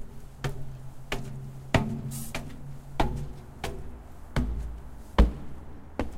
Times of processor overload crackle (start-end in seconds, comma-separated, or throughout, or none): none